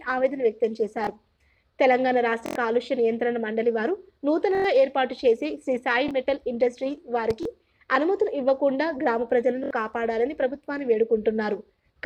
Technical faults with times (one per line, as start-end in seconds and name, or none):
1.04-1.07 repeated buffer
2.46-2.55 repeated buffer
4.55-4.64 repeated buffer
6.08-6.11 repeated buffer
7.30-7.33 loud pop
7.43-7.45 repeated buffer
9.64-9.71 repeated buffer